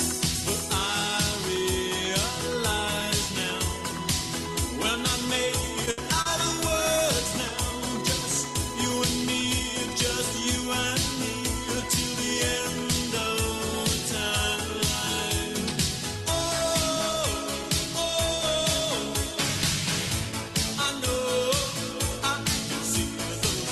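At 5.91 s and again at 6.22 s the sound briefly hangs, held for about 70 ms and then about 40 ms with a slight buzz or dip. These are short stalls from a late packet: the jitter buffer ran dry, and the receiver stretched the last sound until the data arrived.

From 20.25 to 20.49 s the audio runs hurried at unchanged pitch, about 12% fast. This is a jitter buffer speed-up, where repeated pitch-period-sized cuts totalling a few tens of milliseconds trimmed the excess buffered delay.

Throughout, the band tops out near 12 kHz with coding noise from the Opus call path, which fits a rate of about 24 kbps.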